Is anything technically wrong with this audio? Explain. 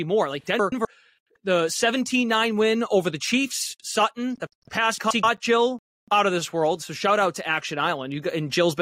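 Yes, two short stretches of the speech have frames out of order, at 0.59 to 0.85 s and again right after "the pass" at 4.98 to 5.24 s. In each, two neighbouring 128 ms blocks play swapped, which fits runs of about four frames, so you get a garbled flutter.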